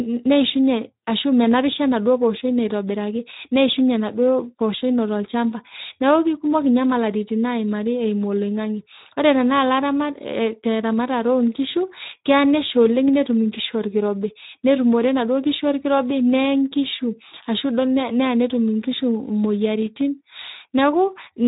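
From start to finish the speech passes through the Speex codec at a low setting, with damage that fits a bitrate of about 11 kbps. At that rate the CELP coder has too few bits to model the excitation signal, so the voice sounds rough, grainy and hoarse throughout. The band is also cut to telephone width, with nothing above 3.8 kHz, which leaves the speech dull and boxy.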